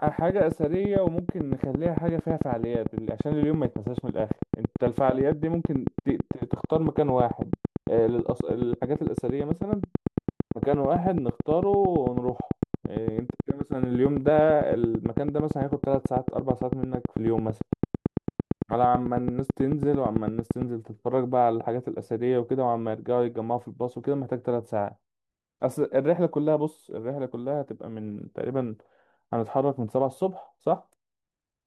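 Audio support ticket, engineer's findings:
Train of clicks, 0.07 s to 20.63 s: regular ticking at 9 per second, some 200 in all, peaking well above the speech and audible through pauses. Likely interference or a faulty connection injecting pulses. Near-identical shape and steady pace separate it from random crackle.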